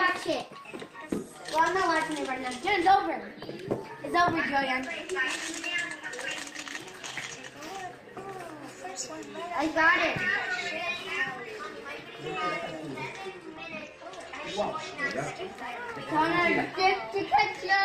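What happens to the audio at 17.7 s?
At 17.7 s, three faults overlap. The sender's clock runs around 4 percent faster than the receiver's, so this clock drift between sender and receiver keeps overfilling the jitter buffer. The receiver has to keep discarding material, leaving small, unevenly spaced timing hiccups that run through the whole clip, including this point.

Those trims are the repeated timing corrections, which run from 0.06 s and stop at 17.75 s, just after this moment. They all shorten the audio, pushing it about 3 percent fast. Each cut is tiny, so the result is a slightly rushed, unsteady pace with occasional skips, not an obvious gap.

A filter is also restarted on every block. It loses its state at each boundary and begins again from silence, so every block opens with a small transient. These form a steady 46.9 Hz buzz, which fits a 1024-sample block, and it grows louder and softer with the sound's level.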